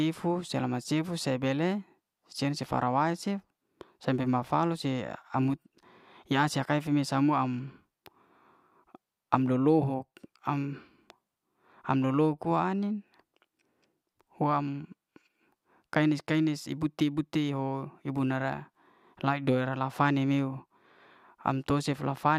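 Speech recording; no audible technical faults.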